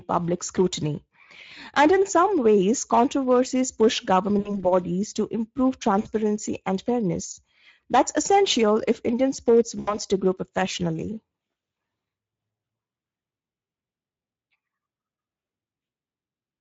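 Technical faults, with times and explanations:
Throughout: Speex codec. The speech has a hoarse, grainy edge, with plainly audible coding damage. This CELP coder has too few bits to model the excitation faithfully, so it substitutes a coarse approximation. The damage fits a middle-quality setting of roughly 17 kbps. Unlike a bandwidth-limited narrowband call, the clip keeps some energy above 4 kHz, but that energy is a shaped, noise-like hiss rather than real detail.
4.39–4.66 s, 6.01–6.11 s and 9.79–9.97 s: VoIP packet loss concealed by the speech codec. Each gap is filled with a stretched continuation of the preceding sound that fades in level. The lost stretches are about 60, 40 and 80 ms. The decoder repeats its last pitch and filter and lowers the gain frame by frame. The weakness lingers after the packets return because each frame depends on the one before, which separates this from a clean dropout or a click.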